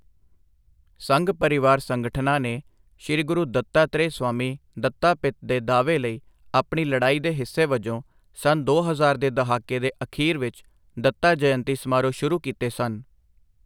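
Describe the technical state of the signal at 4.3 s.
At 4.3 s the speech signal is intact, with no audible fault at that point.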